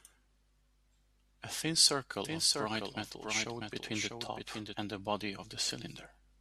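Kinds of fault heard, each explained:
Doubled audio track: from 2.25 s to 4.75 s a second, full-band copy of the speech runs roughly 0.7 s behind the original and about 5 dB quieter. It is likely caused by the same signal being captured again through a slower path, or by an edit leaving two copies out of step. The copy carries no reverberant tail or room colouring, and it cuts in and out abruptly at both ends.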